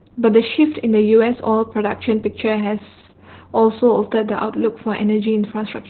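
Opus voice compression runs through the whole of this speech clip. The sound is heavily damaged: nothing reaches above about 4.3 kHz, so the speech is muffled and boxed-in, and it has a hoarse, slightly robotic edge. That fits the codec's linear-prediction speech mode working narrowband at a very low rate, around 8 kbps. At that rate it drops the upper band entirely and codes the vocal excitation coarsely.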